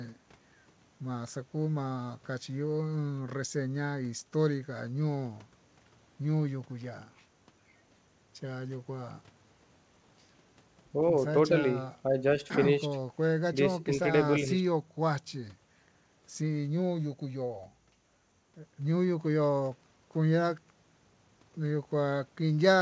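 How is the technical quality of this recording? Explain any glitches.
No glitches can be heard anywhere in this speech recording.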